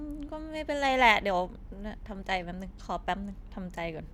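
Nothing in this speech recording stands out as a technical fault; there's no dropout, glitch or distortion anywhere along the way.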